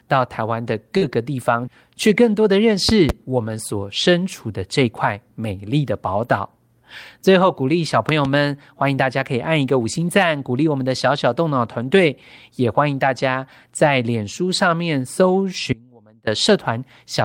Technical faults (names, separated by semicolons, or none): short concealed packet loss; lost packet rebuilt from error correction; loud pop; audio dropout to a faint residue